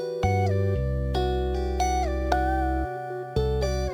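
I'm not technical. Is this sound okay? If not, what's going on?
No. Throughout the clip there is a crude rate conversion. The audio was moved from a 44.1 kHz rate to 48 kHz by simply repeating the nearest existing sample to fill the gaps, with no smoothing filter. Those repeats fall in a regular pattern set by the two rates, which adds faint tones that have nothing to do with the actual sound. You hear them as a gritty, slightly metallic fizz riding on the louder and brighter parts.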